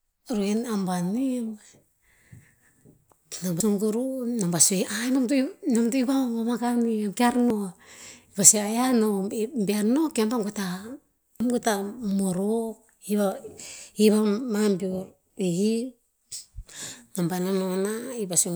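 At 3.60, 7.50, 11.40 (just before "goe ta morok") and 15.30 s the speech abruptly skips forward, each jump taking roughly a tenth of a second of sound. The even 3.9 s spacing points to audio missing between chunks, likely from a recorder handling 4 s blocks and losing a sliver at each handover. Unlike a dropout, no silent gap is heard. The two sides butt straight together.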